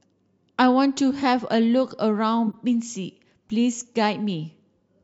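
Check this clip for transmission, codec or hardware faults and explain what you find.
Two short bursts of corrupt frame decoded appear in this speech, one from 2.47 to 2.54 s and a fainter one at 3.50 s. Damaged bits in a few compressed frames were decoded anyway, so misread gains and codes put energy at the wrong frequencies, heard as a chirp, squeak, blip or burst of noise, the second weaker than the first. On a spectrogram each shows as a frame-length smear of energy at wrong frequencies unrelated to the harmonics. In the waveform the first is a fairly loud jagged spike, and the second is a much smaller one.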